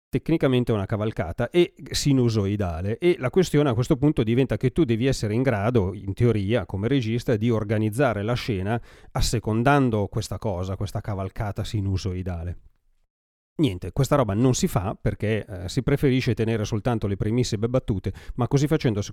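No technical faults are audible.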